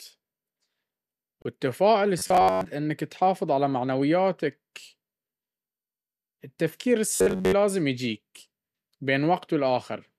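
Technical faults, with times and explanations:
1.42–1.45 s: gap at a join of encoded pieces. The speech drops out for 30 ms with smeared edges, where separately encoded pieces were joined without trimming.
2.19–2.67 s, just before "انك تحافظ على معنوياتك", and 7.15–7.53 s: robotic sound from repeated short buffers. The speech turns into a metallic buzz at 93.8 Hz, likely from looping a roughly 11 ms buffer for most of each stretch.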